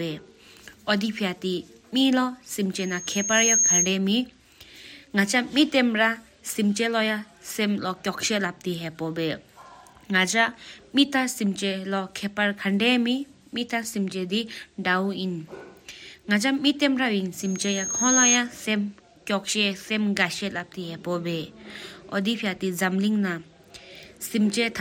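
A speech recording with loudspeaker feedback squeal breaking out twice, from 2.78 to 3.97 s and again from 17.36 to 18.40 s. Both times it's the same thin tone at 6.5 kHz, swelling over roughly 0.7 s the first time and a second the next, until it sits around 5 dB above the speech. What's happening is the mic hearing its own loudspeaker, and at 6.5 kHz the loop gain tips past one, so that frequency keeps feeding itself until the amplifier limits it or the loop gets broken.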